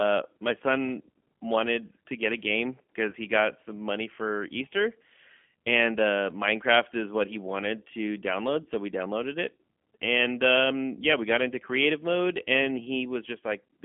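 Throughout, the G.729 codec is plainly audible: a 200 Hz to 3.4 kHz telephone band with a rough, slightly synthetic texture. The sound is rebuilt from a filter, a pitch predictor and a few pulses at about 8 kbit/s. That modelled grain is what separates it from simple band-limiting.

From 3.10 to 3.15 s, and again from 8.63 to 8.67 s, VoIP packet loss concealed by the speech codec shows up. The decoder stretches its last frame into a brief buzzy tone or coloured noise that fades, consistent with one lost 30 ms packet. This differs from a hard dropout to silence, and the sound stays weak or distorted for tens of milliseconds afterwards.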